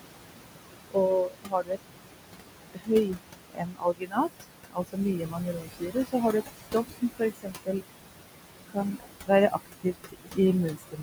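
Noise suppressor artifacts run through the whole clip. The room noise sits about 9 dB below the speech. The suppressor pulls it down by about 21 dB in the gaps, frame by frame. Under the speech the noise comes back up. So the background pumps in and out with the talking. It never sounds like a steady floor.

Speech is cut by the noise suppressor four times. The first cut runs from 0.91 to 1.78 s, with about half a second affected and drops of about 22 dB. The longest runs from 2.72 to 7.82 s, with about three seconds affected and again about 22 dB. From 8.69 to 10.38 s about half a second is affected, at about 20 dB. The last runs from 10.7 s to the end, with a fifth of a second affected at about 18 dB. In each stretch the suppressor mistakes quiet speech for noise. Soft consonants, word endings or a quiet phrase sink with the background and sound swallowed.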